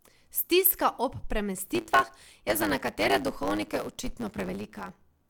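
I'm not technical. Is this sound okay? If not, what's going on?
No. From about 1.74 s to the end, the speech picks up a steady buzz of about 109 Hz and runs about 1.09 times faster. This is a block size mismatch (truncated): one step passes along chunks of audio longer than the next step accepts, so each chunk's tail is dropped.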